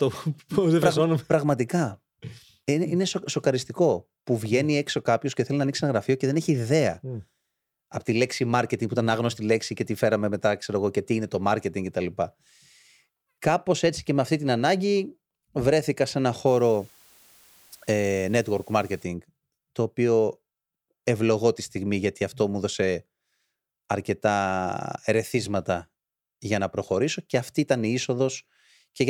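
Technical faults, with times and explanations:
16.47–19.04 s, low bit depth with dither: the speech is requantised to very few levels, consistent with about 8 bits, with dither added before rounding. The rounding error becomes a steady, even hiss, around 30 dB below the speech, without grainy distortion.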